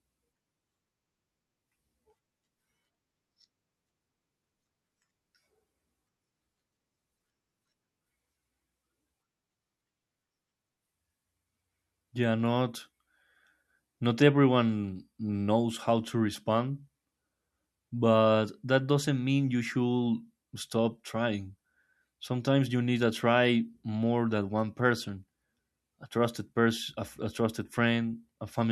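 Listening through the speech recording, nothing stood out as a technical fault at any point.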